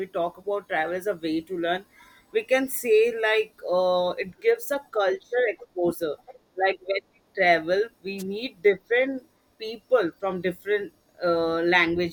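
At 8.18 to 8.23 s, just after "travel we" and before "meet different people from", a brief swish of static flares up for about 50 ms. This is a wireless microphone noise hit: the FM radio link from the microphone momentarily faded as reflected signals cancelled the direct one, so the receiver's own hiss surged and briefly broke through before the signal recovered.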